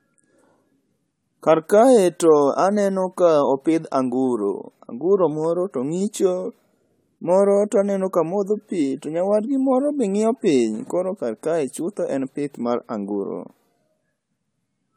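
Speech with generation loss throughout: the sound is swirly, hollow and smeared, consonant attacks blur, and it is worse than one encode at 96 kbit/s would give. The likely cause is repeated AAC-LC re-encoding, around seven passes, with quantisation noise and spectral holes accumulating.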